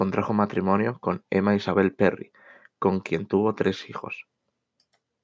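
No technical faults can be heard in the speech; it carries the usual signature of a call's microphone processing, with the lowest bass trimmed by its high-pass filter and nothing present above 8 kHz.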